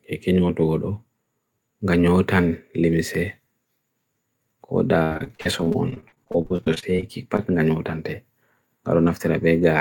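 A speech clip with repeated packet loss (robotic sound) from 5.03 to 7.40 s. Dozens of short gaps, the longest 75 ms, are patched by stretching the preceding sound, leaving about 29% of that stretch concealed. Unlike a single dropout, the rapid succession gives a choppy texture with pieces missing.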